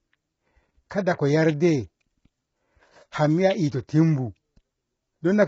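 Speech, degraded throughout by what is likely low-delay AAC compression: the voice sounds rough and grainy, with noise filling the gaps between harmonics and nothing above 7.7 kHz. The heavy damage fits AAC-ELD at around 16 kbps, where short frames starve pitch detail.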